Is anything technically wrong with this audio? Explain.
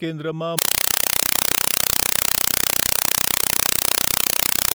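Yes. From 0.59 s to the end, the speech gives way to very loud, chattering static pulsing 31 times a second in 4 ms bursts. It is a compressed stream played as audio: undecoded frames, fitting Dolby Digital, are read as samples, each a noise burst then silent padding.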